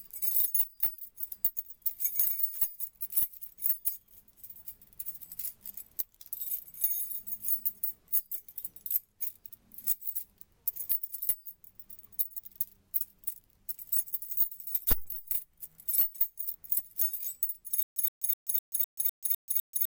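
At 17.83 s a stutter with silent gaps begins and runs to the end: a 120 ms burst repeats every 253 ms with about 133 ms of dead silence between, likely a stalled stream replaying its last fragment. Those empty gaps set it apart from a seamless loop.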